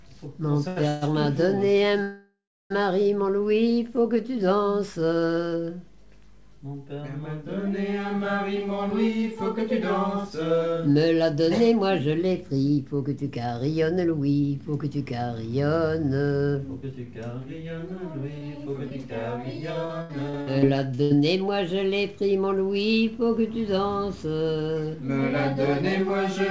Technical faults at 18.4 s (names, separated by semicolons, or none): repeated packet loss (robotic sound)